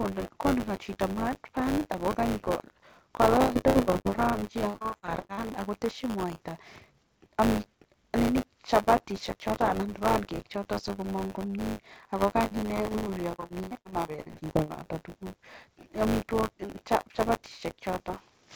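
A steady robotic buzz at 100 Hz rides under the speech for the whole clip. This is buffer tearing: writer and reader have slipped, so roughly a tenth of each period replays audio about 20 ms old, with hard joins on both sides.

From 3.42 to 5.51 s the speech turns choppy, with pieces missing, with more than twenty dropouts up to 78 ms long. This is repeated packet loss (robotic sound): lost packets are patched by stretching the last sound, and about 41% of that span is concealed this way.

The same repeated packet loss returns from 12.39 to 14.88 s, with holes up to 106 ms long and about 37% of the span concealed, so it sounds broken and robotic again. Throughout, the band stops at about 7 kHz, which fits the G.722 call path at 64 kbps.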